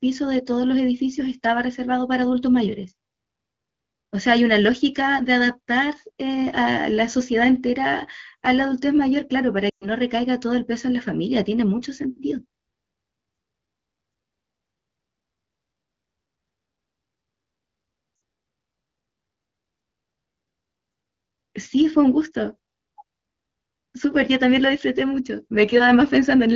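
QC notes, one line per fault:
9.69–9.89 s, lost AMR speech frames: the speech drops to near silence within two frames. The decoder is repeating the last good frame at falling gain. The 120 ms gap fits six 20 ms frames.
18.15–18.21 s, lost AMR speech frames: a shorter 60 ms dropout, heard as a quick drop to near silence. The concealment fades fast in wideband, and the voice returns briefly rough.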